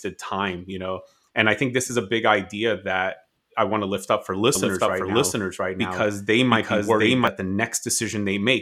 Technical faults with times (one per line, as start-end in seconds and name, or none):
4.55-7.27 doubled audio track